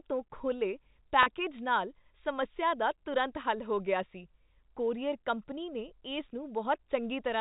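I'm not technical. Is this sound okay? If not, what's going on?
No. At about 1.23 s there is a brief glitch: a 30 ms stretch of the speech went missing in transit, which fits a single lost packet. This is packet loss with pitch repetition. The receiver filled the hole by replaying the last tiny cycle of the voice, so instead of a gap you hear the sound briefly held with a slight buzz until about 1.26 s. The telephone-quality G.711 coding, which cuts off everything above 4 kHz, isn't the cause.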